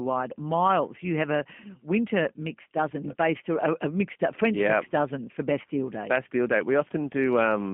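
From start to finish the speech carries G.729 codec damage, and it is plainly audible. The codec rebuilds each 10 ms frame from a vocal tract filter, a pitch predictor and a handful of pulses, so the voice comes out slightly rough and synthetic, with a buzzy, coarse texture. Nothing survives outside a narrow line band of about 150 Hz to 3.5 kHz, which leaves it thin and muffled, consistent with an 8 kbit/s G.729A link.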